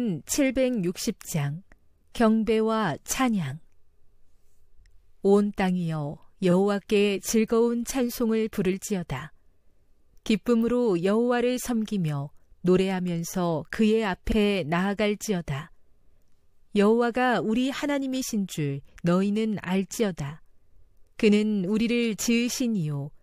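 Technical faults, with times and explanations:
6.50–6.53 s and 14.31–14.35 s, repeated frames: a short stretch of compressed audio was delivered to the decoder twice, so it played the same slice again before moving on. The first repeat is 23.2 ms, consistent with one frame; the second is 46.4 ms, consistent with two. Each is heard as a brief stutter, and together they lengthen the speech by about 70 ms.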